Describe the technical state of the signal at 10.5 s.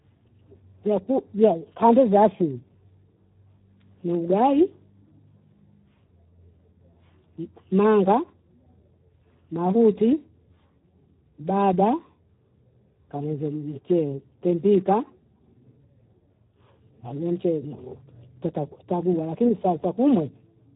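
The speech at 10.5 s carries the same Speex codec damage as the rest of the clip. It's heavy, and it sounds like a low Speex setting, roughly 8 kbps. At that rate the CELP coder has very few bits to describe the excitation, so the voice comes out hoarse and grainy. The top end is gone too: nothing survives above about 3.8 kHz, which gives it a narrow, phone-like sound.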